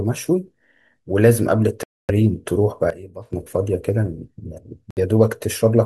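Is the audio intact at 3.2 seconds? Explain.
No. A sudden gain jump spans 2.90 to 3.33 s: speech and background noise drop together by about 14 dB, likely from gain applied without a ramp, showing as an abrupt step in waveform amplitude.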